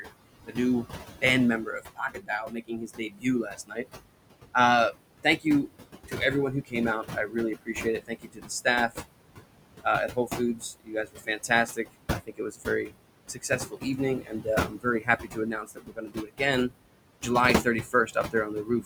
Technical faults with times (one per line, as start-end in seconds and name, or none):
0.00-18.85 noise suppressor artifacts
0.02-3.86 speech cut by the noise suppressor
4.54-8.99 speech cut by the noise suppressor
9.83-16.72 speech cut by the noise suppressor
17.64-18.85 speech cut by the noise suppressor